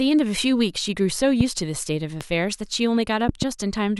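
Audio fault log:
1.41–1.43 s, 2.21–2.23 s and 3.29–3.45 s: loud pop, a single sharp pop at the first two and a quick double pop at the last, standing roughly 15, 10 and 15 dB above the speech, which continues underneath. A sudden voltage step or pulse, likely from a plug, switch, static or driver glitch, was added to the signal. On the waveform each appears as a tall spike; on a spectrogram, as a thin vertical broadband stripe.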